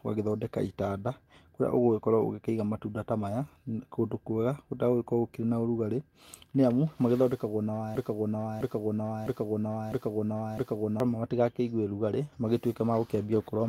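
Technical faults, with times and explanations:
7.95–11.00 s, broken-record loop: A 0.66 s fragment of speech repeats five times, back to back and identical each time. The likely cause is a stalled player or stream resending its last held piece. The speech due in those three seconds is lost.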